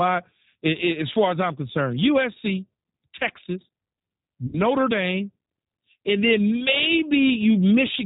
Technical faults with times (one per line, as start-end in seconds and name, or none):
0.00-8.05 G.729 codec
4.47-4.62 VoIP packet loss concealed by the speech codec